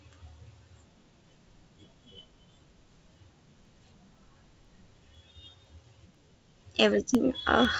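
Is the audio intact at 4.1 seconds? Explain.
No. Around 4.1 s the sound falls within a run of periodic USB or driver dropouts spanning 3.15 to 7.65 s. Every 0.5 s a blocked bus or driver loses about half a millisecond of audio to silence, heard as regular ticks while sound is present.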